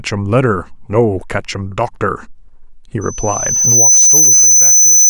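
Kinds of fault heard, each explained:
Loudspeaker feedback squeal: from 3.01 s a 6.1 kHz tone rises over about a second, as microphone and loudspeaker form a looping gain, ending roughly 10 dB above the speech.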